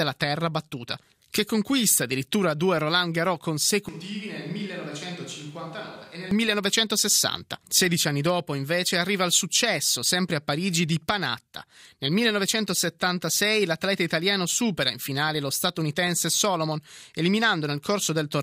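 Switch to a distant microphone, from 3.89 to 6.31 s: the speech abruptly turns hollow and roomy, with thinner bass, roughly 10 dB quieter, and background noise only some 25 dB below it. The close microphone's signal likely dropped out, leaving a farther pickup.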